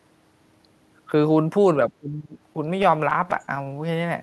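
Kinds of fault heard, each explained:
Speech suppressed in double talk: Between 1.9 and 2.36 s the speech sinks by as much as about 20 dB, with around 0.4 s affected in total. The likely cause is an echo canceller that could not tell its own talker from loudspeaker echo while both sides spoke, so it turned everything down. On a waveform the envelope visibly caves in there. On a spectrogram the energy thins.
Repeated stalls (stutter): From 2.53 to 3.68 s the audio drags and catches in 14 short hiccups. Each time, the receiver ran out of incoming sound and stretched the last bit of audio until it could continue. No gap lasts longer than 15 ms and none of the sound is lost, but about 13% of that stretch is filler. On a spectrogram this appears as repeated, smeared slivers. On a waveform it shows as little repeated segments that break the natural rhythm.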